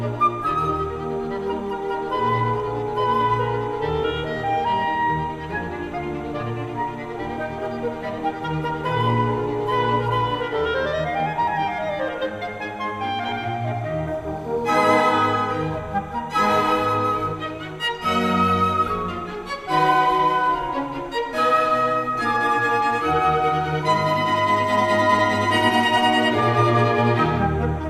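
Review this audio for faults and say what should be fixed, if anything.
Timecode bleed runs through the whole clip as a warbling chirp about 30 dB below the programme. Linear timecode is a square wave that alternates between two pitches an octave apart, here around 1 kHz and 2 kHz, and its cadence fits 29.97 frames-per-second code. It is leaking in from a neighbouring track or cable rather than coming from the source. To prevent it, route timecode on separate, shielded cabling away from audio lines and keep it off adjacent tracks.

From 16.35 s to 16.85 s the audio picks up grainy distortion and a noise floor that follows the waveform, the signature of a stuck bit. One data bit held at a fixed value knocks roughly half the samples off by a step of about -45 dBFS. The pattern depends on the waveform, and small values near zero flip sign-dependent errors into noise. The likely cause is an intermittent data line or converter fault. 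To prevent it, inspect and reseat converter connections and run a bit-pattern test on the interface.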